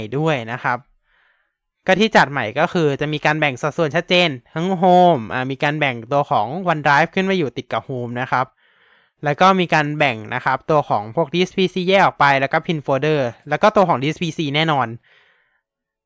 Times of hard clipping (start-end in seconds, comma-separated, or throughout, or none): none